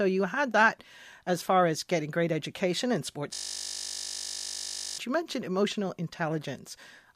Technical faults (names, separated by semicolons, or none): system hang loop